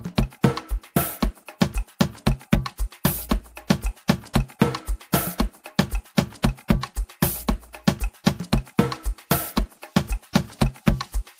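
No technical faults can be heard anywhere in the audio.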